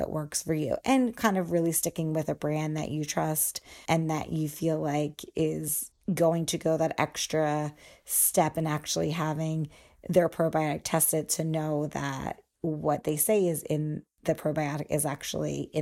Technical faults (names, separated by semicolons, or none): loud pop